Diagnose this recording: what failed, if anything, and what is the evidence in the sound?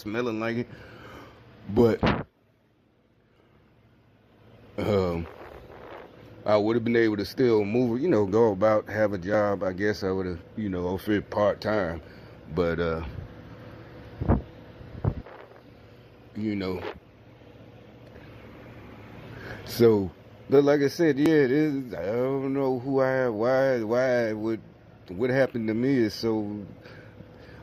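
Overlap between stream segments, at the segment-joining stage of streamed playback. Tiny clicks or skips occur at 1.37, 3.36, 7.36, 9.34, 13.32, 17.30, 19.28 and 21.26 s, spaced in multiples of 2 s, matching 2-second segments. Overlapping time stamps make the player discard a few milliseconds that were never duplicated, so the waveform jumps.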